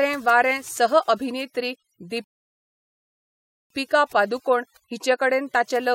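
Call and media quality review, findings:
Overdone noise removal, throughout. Background drops and breaks up into twinkling specks. Probable component: noise suppressor set too aggressive. Bands near its noise estimate are cut hard, taking quieter speech detail with them.

Rebuffering stall, 2.24 to 3.70 s. Audio cuts to silence, then resumes exactly where it stopped. No content lost; about 1.46 s added. Probable component: playback buffer. Player ran out of downloaded audio and waited for more.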